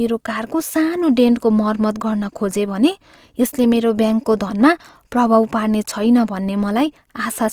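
From start to finish the speech carries plainly audible coding damage, likely from Opus compression running in its music-style CELT mode. The bandwidth stays wide, with nothing above about 20.4 kHz, but the bit budget is thin, which fits a rate around 24 kbps. Bands the encoder can't afford are filled by copying lower ones or with noise, so instead of swirly holes the voice turns rough, grainy and a bit hissy.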